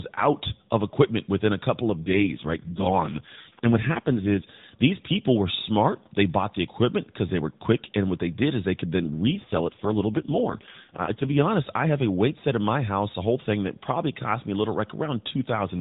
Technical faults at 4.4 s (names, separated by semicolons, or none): AMR rate drop